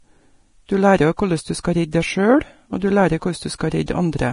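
From start to finish the speech sounds hissy and grainy. The upper frequencies turn to a rough, noise-like wash, consonant onsets are smeared, and tonal parts of the sound have a gritty texture. The damage is heavy and is most likely Vorbis compression at a low setting, which fits a bitrate around 32 kbps. The codec lowered its cut-off and quantised the treble so coarsely that fine detail was replaced by noise of similar energy.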